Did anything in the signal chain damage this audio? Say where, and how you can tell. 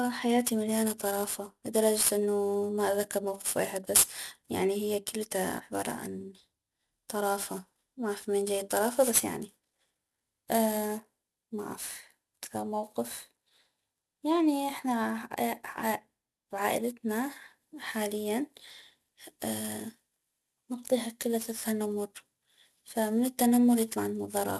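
Yes: sample-rate conversion without an anti-alias filter causes aliasing throughout, with sibilant energy folding back around 12 kHz as gritty, metallic hiss about 10 dB below the speech, consistent with a 44.1 kHz to 24 kHz conversion.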